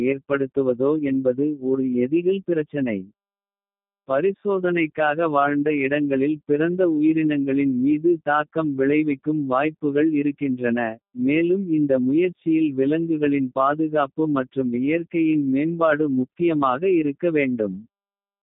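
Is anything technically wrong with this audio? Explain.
Yes. Throughout, the speech shows G.729 codec damage: the band runs only from 150 Hz to 3.7 kHz, and the speech is rebuilt from a vocal-tract model plus sparse pulses, which fits an 8 kbit/s rate. Unlike plain telephone filtering, it sounds rough and synthetic, not merely muffled.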